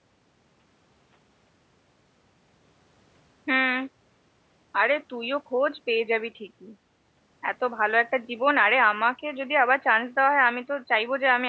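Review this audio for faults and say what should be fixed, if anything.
Nothing in this speech recording needs fixing. The room noise sits about 53 dB below the speech, and the call's microphone processing leaves nothing above 8 kHz.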